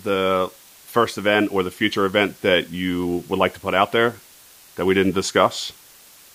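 From start to finish the speech sits over a steady, even hiss. This is low bit depth with dither, pointing to about 8 bits. Dithered rounding turns quantisation error into white noise roughly 25 dB below the speech. A spectrogram shows a flat, uniform noise floor across all frequencies, filling gaps between phrases.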